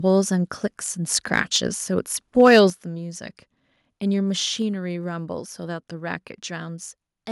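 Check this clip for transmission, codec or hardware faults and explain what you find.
Two faults can be heard: the microphone overloads twice, and the input level then drops in a single step.

Microphone overload occurs at 1.37 to 1.4 s, about 2 dB over full scale, and again at 2.39 to 2.6 s, about 4 dB over. The likely cause is an input gain set too high, so the loudest peaks hit the converter's ceiling and are sheared off, giving a harsh crackle. On the waveform the peaks are flat-topped, with only a small fraction of samples clipped in the first burst and a few percent in the second. A spectrogram shows broadband smearing across the upper bands.

The microphone volume steps down at 2.7 s by about 8 dB. The likely cause is call software reacting to the clipping just before it and cutting the device gain all at once, so both the voice and the background fall abruptly. The waveform envelope shows a sudden drop, and the spectrogram darkens uniformly from that moment.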